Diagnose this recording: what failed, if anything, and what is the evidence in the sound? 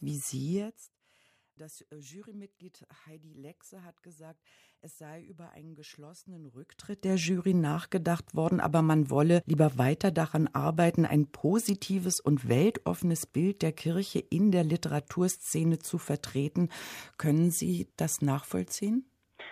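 Zipper noise from 0.49 to 0.92 s, as the speech level drops by roughly 25 dB. The gain moves in unsmoothed 2 dB steps, about 40 a second, each leaving a tiny click, so a fast ticking rides the fade. This points to per-buffer gain updates in processing.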